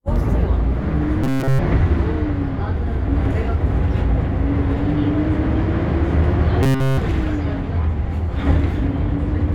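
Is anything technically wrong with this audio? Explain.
Yes. There are two bursts of robotic sound from repeated short buffers, at 1.24–1.59 s and 6.63–6.98 s. In both, the sound turns into a rigid metallic buzz at 133 Hz. That pitch fits a fragment of about 7.5 ms being looped in place of essentially all of the real audio, likely because new data arrived too seldom. On a spectrogram each burst shows as evenly spaced horizontal harmonic lines at multiples of 133 Hz. The waveform shows one identical cycle repeating every 7.5 ms.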